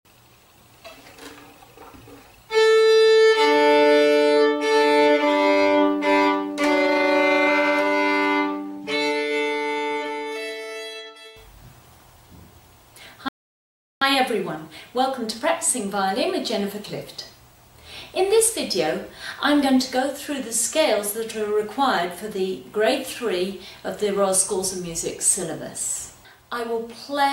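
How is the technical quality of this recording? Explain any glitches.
The recording has one glitch, a rebuffering stall. From 13.28 to 14.02 s the playback ran out of downloaded audio and halted for about 0.73 s until more data arrived. The sound drops to silence, then continues exactly where it stopped, so nothing is missing but the timeline is stretched. On a waveform it shows as a flat gap; on a spectrogram, a clean empty vertical band.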